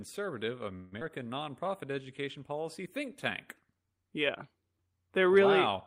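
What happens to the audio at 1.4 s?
At 1.4 s the speech is inside a jitter buffer slow-down. It runs from 1.23 to 2.22 s, just before "policy think tank". The receiver's buffer was short of reserve, so it stretched the audio by repeating single pitch periods and small slices of pause. That adds about 90 ms over the span. Playback drops to 92% speed. The pitch stays the same, but the sounds are drawn out and the speech feels slightly sluggish.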